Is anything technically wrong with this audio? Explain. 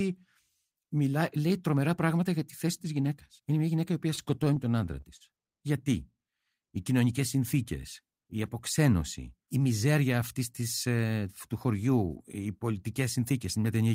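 Yes, the speech has two faults.

From 4.15 to 5.22 s, just after "μια γυναίκα η οποία", there are repeated stalls (stutter). The jitter buffer ran dry seven times, and each time the receiver extended the last sound instead of leaving silence. Those extensions total about 103 ms, the longest lasting 40 ms, and nothing is lost. The speech drags and hiccups. A spectrogram would show short stretches where the harmonics freeze into flat horizontal bands, and the waveform would show repeated cycles.

From 8.79 to 9.21 s, between "κοινωνικέ συνθήκε η" and "η μιζέρια αυτής της", there is a jitter buffer speed-up. The buffer held too much audio, so the receiver trimmed whole pitch periods, about 40 ms in total. Playback ran at 107% with unchanged pitch and sounds hurried. The harmonic spacing stays the same on a spectrogram while syllables compress in time.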